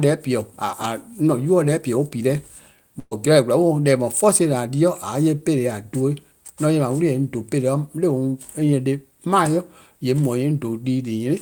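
Speech clip with a burst of packet loss from about 2.99 to 3.13 s: the receiver holds and fades the last sound for roughly 117 ms, drops into about 20 ms of silence, then picks up again with around 120 ms of the talk simply gone.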